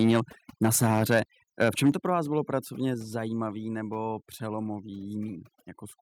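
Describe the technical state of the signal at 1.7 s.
Microphone overload runs from 1.61 to 1.9 s, just before "to pro vás bylo". The tops of the peaks are flattened, adding a harsh crackle. The likely cause is an input level pushing about 4 dB past the converter's limit. Overdone noise removal is also present here, as throughout. Heavy spectral subtraction leaves a lowered background that breaks up into twinkling specks.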